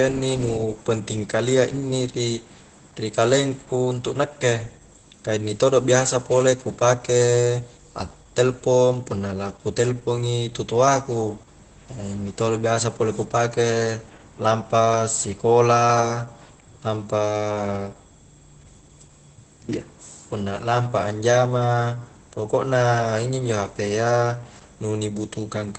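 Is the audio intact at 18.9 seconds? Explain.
No. Opus voice compression runs through the whole clip, including 18.9 s. At a rate that fits 12 kbps, SILK's coarse linear-prediction coding makes speech muffled, hoarse and faintly robotic. A spectrogram shows nothing above 8.6 kHz and smeared harmonics.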